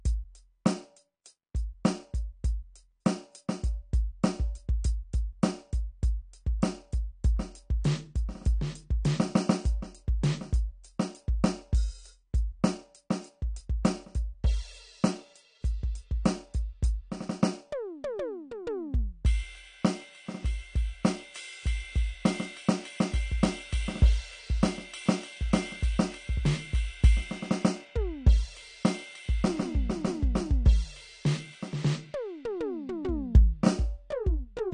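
Throughout the music, nothing sounds above 9.6 kHz and sustained tones warble with smeared, fizzy texture, likely AAC compression, consistent with roughly 32 kbps.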